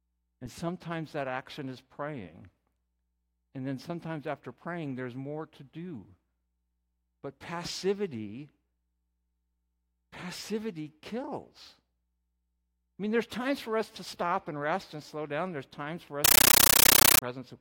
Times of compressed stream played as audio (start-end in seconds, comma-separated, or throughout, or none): 16.25-17.22